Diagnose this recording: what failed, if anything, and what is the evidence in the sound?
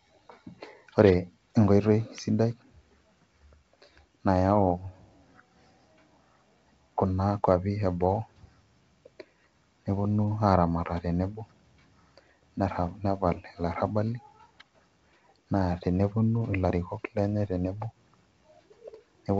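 Nothing failed: the speech carries the bandwidth and faint upper-band hiss of G.722 wideband telephone coding at 64 kbit/s, which is that codec working as intended.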